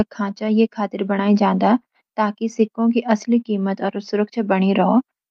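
No technical faults are audible.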